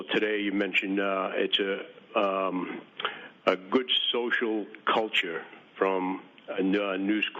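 No technical faults can be heard anywhere in this audio. Nothing interrupts or degrades the sound at any point.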